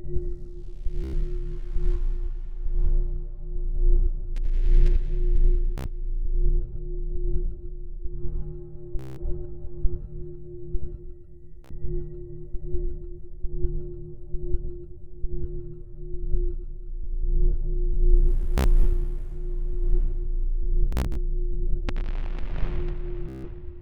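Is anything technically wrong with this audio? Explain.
Yes, there's Bluetooth stutter in seven places: 1.04–1.14, 5.78–5.86, 8.99–9.21, 11.65–11.72, 18.58–18.67, 20.93–21.17 and 23.29–23.47 s. Packets arrived late or not at all, so the receiver kept replaying its last short slice, which fits frames of about 15 ms. That gives a buzzy, machine-gun repeat before the audio jumps ahead. The missing stretches run 61 to 183 ms, with the longest at 8.99 s. At 20.93 s the dropouts are scattered across about 244 ms.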